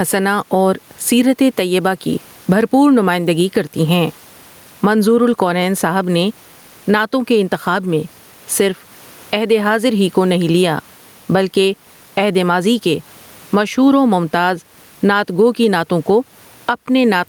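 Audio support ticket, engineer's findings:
Gain pumping throughout the clip, about 15 dB swing. Dynamics squashed. Likely input gain far too high, with a fast limiter clamping every peak. Room noise sits about 41 dB below speech.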